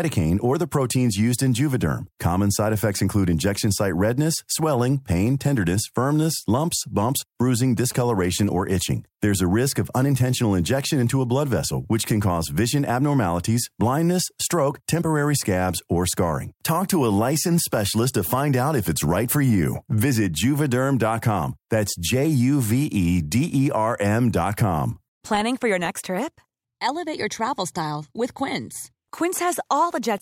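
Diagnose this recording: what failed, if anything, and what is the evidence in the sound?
The analogue wiring picked up radio bursts from a nearby 2G phone and rectified them, producing GSM signalling bursts from 7.77 to 8.73 s, just after "firmness lumps bumps bruising". They sound like a galloping dit-dit-dit pattern of short 217 Hz buzzes, roughly 20 dB below the speech.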